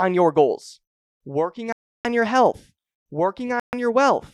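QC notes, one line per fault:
1.73–2.05 s and 3.60–3.73 s, Bluetooth stall: speech drops to silence for about 0.32 s, then about 0.13 s, and resumes. This is likely a wireless link buffer running empty while delayed packets were retransmitted, so playback halts instead of glitching.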